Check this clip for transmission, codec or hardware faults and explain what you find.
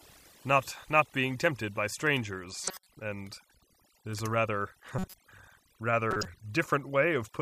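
Two faults are present in this speech clip: over-aggressive noise reduction across the whole recording, and three short bursts from corrupt frames being decoded.

Overdone noise removal runs throughout. The noise suppressor was pushed so hard that any frequency band close to its noise estimate is pulled down or gated off, and quieter parts of the voice get caught with the noise. Between phrases the background drops to near silence with small twinkling specks. On a spectrogram the gaps show as dark, almost empty areas dotted with isolated bright points, and the speech harmonics look patchy, with holes where weaker bands were removed.

Corrupt frame decoded occurs at 2.64–2.87 s, at 4.99–5.14 s just after "there's a rather", and at 6.11–6.26 s. In each case damaged bits in the compressed stream were decoded anyway. Misread gains or codes put energy at frequencies where it doesn't belong for the length of the affected frames, which sounds like several consecutive frames in the first and third events and a few fewer in the second. 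Each event sounds like a brief chirp or squeaky noise burst, peaking at about -15 dBFS for the first and last and about -20 dBFS for the middle one. On a spectrogram these appear as blocky patches of misplaced energy with sharp edges at frame boundaries. On the waveform they are short jagged segments that don't follow the surrounding envelope.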